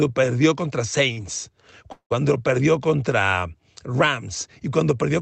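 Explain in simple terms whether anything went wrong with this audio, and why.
Yes, two things went wrong, both in how the speech travelled over the call connection.

At 1.13 to 1.19 s, just after "perdió contra", there is a short stall from a late packet. A small piece of audio arrived late, and the receiver's waiting store of audio ran dry. To avoid a hole, it stretched the last bit of sound for about 35 ms until the piece arrived, then carried on from the same spot. Nothing is lost, but that moment sounds slightly held, with a slight buzz or dip.

From 1.92 to 2.12 s, just before "perdió contra", there is a call audio freeze. The likely cause is that the audio was held up on its way across the network for longer, so the receiver again ran out of sound to play. It filled about 180 ms by continuing the last sound, which fades out, and roughly 110 ms of that is silence. When the audio caught up, the speech resumed where it had stopped. 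So nothing is missing, but a pause is added.

Both hiccups happened on a call connection that limits the sound to frequencies below about 8 kHz.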